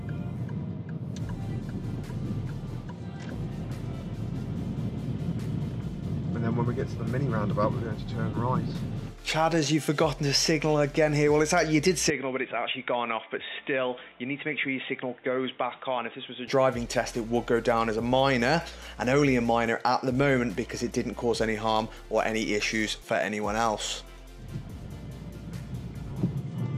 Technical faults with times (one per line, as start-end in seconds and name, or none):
12.10-16.48 input switched to a poorer device